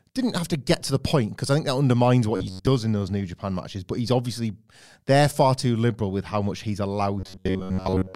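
Robotic sound from repeated short buffers occurs at 2.36 to 2.67 s and again from 7.2 s to the end. Most of the real speech is skipped while a roughly 10.7 ms chunk likely repeats, imposing a fixed 93.8 Hz metallic buzz on the speech.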